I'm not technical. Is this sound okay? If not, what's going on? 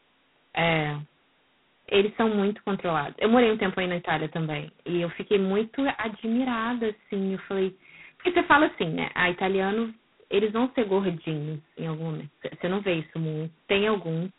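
No. From start to finish the speech sounds rough and rasping, with a hiss that rises and falls with the speaking, and a thin telephone tone with nothing above 3.9 kHz. This is heavy G.726 ADPCM damage: a phone-line codec squeezing sound into very few bits.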